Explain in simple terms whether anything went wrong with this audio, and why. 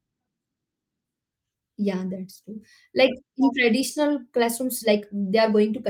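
Nothing went wrong with this audio; it has no faults to explain.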